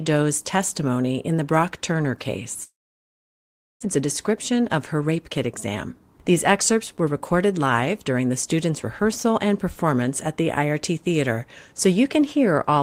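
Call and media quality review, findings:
Long network dropout, likely cause, 2.63 to 3.85 s: about 1.1 s of silence filling a 1.19 s gap, roughly 1 s of speech never played. Receiver concealment gives way to silence. Resumes later, with around 150 ms delay shift.

Jitter buffer speed-up, 3.96 to 5.86 s at 106% speed, sounding hurried, and 6.30 to 7.52 s at 104%: pitch unchanged. Buffer held more audio than its target; receiver trimmed short pitch-period pieces repeatedly, roughly 100 ms and 50 ms removed.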